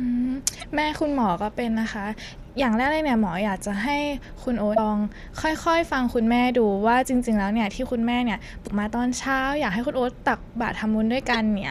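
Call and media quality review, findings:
Damaged data in a compressed stream at 0.60–0.63 s, 4.74–4.79 s, 8.64–8.68 s and 11.33–11.36 s: brief glitches in the speech, 25–44 ms each. Decoder is fed corrupted frames, misreads them and loses sync until the next valid frame header.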